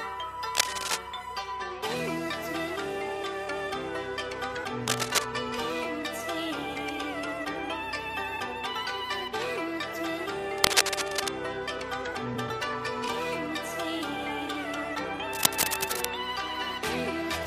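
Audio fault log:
0.54–0.98 s, 4.86–5.24 s, 10.58–11.28 s and 15.33–16.06 s, cable scratch noise: four short stretches of dense, ragged scratching and rustling, each under a second and sitting a few decibels above the sound itself. A worn cable or connector being moved is the likely cause: its contact resistance jumps around rapidly, throwing uneven bursts of noise into the signal. Unlike steady hiss, it comes and goes, and unlike isolated clicks, it forms a continuous rough texture.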